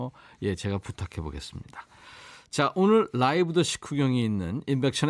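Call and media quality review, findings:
No findings from the call and media quality review; no audible faults in the speech.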